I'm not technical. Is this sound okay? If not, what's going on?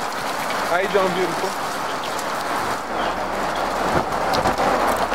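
No. At 1.43 s the sound jumps forward by a fraction of a second. That's compressed frames skipped: a few missing or damaged chunks of the file weren't played.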